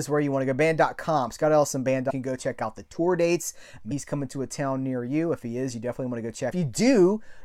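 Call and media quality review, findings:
Damaged data in a compressed stream: brief glitches at 2.09–2.11 s, 3.90 s and 6.50 s; decoder misreads corrupt frames and resyncs. Unlike plain dropouts, these come from lost frame sync.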